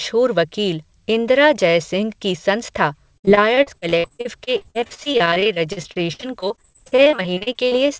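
A speech recording that turns choppy and robotic from 3.18 s to 7.88 s, with the sound breaking into short fragments and small pieces missing throughout. This is repeated packet loss: over that stretch the audio drops out dozens of times, in holes of up to 62 ms, and each hole is patched by stretching the preceding sound, so about a quarter of the span is synthetic fill. The band tops out at 8 kHz, which fits a wideband call codec.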